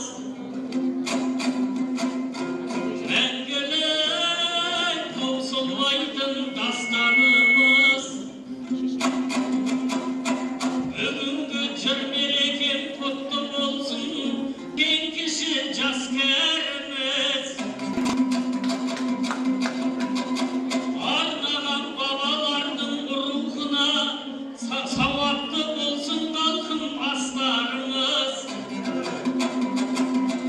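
From 6.46 to 8.02 s there's loudspeaker feedback squeal: the mic catches its own speaker, and a 2.2 kHz tone swells over under a second to roughly 10 dB above everything else.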